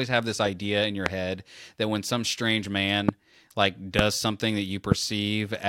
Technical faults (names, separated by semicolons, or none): loud pop